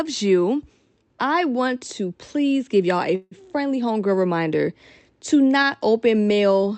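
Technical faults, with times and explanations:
3.15–3.34 s, call audio freeze: packets were likely held up in transit, so the jitter buffer ran dry and the receiver stretched the last sound it had into a fading buzz or hiss for about 160 ms, then about 10 ms of silence, before the held audio arrived and resumed where it left off. Nothing is lost; a gap is inserted, and everything after it plays about 160 ms later, still band-limited at 8 kHz by the call codec.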